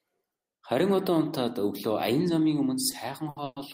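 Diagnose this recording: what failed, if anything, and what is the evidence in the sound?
Network stage, jitter buffer: a short stall from a late packet at 2.91–2.96 s, right after "унтаад өглөө аян замын", and again at 3.29–3.39 s. The last sound is held for 20 ms, then 70 ms, and nothing is lost. A spectrogram shows frozen horizontal harmonics where the sound should move on.

Call audio freeze at 3.44–3.59 s: the sound is held as a fading buzz for about 120 ms, ending in roughly 30 ms of silence before the audio resumes intact. The likely cause is packets delayed in transit emptying the jitter buffer. The waveform shows a decaying repeated cycle, then a flat line.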